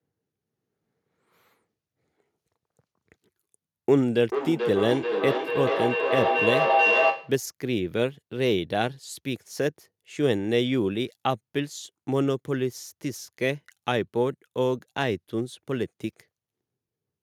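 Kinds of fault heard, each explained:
Feedback echo between two devices: from 3.97 to 7.5 s the speech comes back roughly every 0.4 s, thin and ringing, peaking about 2 dB above the speech. A second device in the room replays this microphone's signal, and each echo canceller ignores the other's playback.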